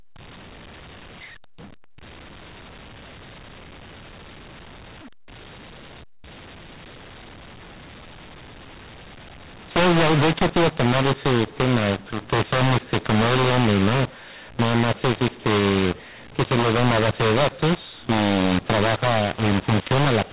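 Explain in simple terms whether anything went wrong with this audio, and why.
Something did go wrong here, and it runs the whole way through, from the first second to the last. It's a case of mu-law and A-law mixed up: the speech was stored in the mu-law flavour of the old telephone format, then played back as if it were A-law. The two use different volume scales, so loud and soft parts come out scrambled, the speech sounds harsh and gritty, and even the gaps between phrases hiss instead of going quiet.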